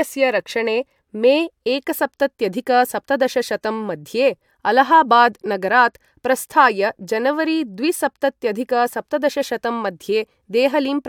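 No audible technical faults present.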